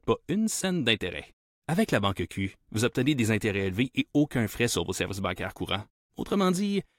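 No technical faults are audible.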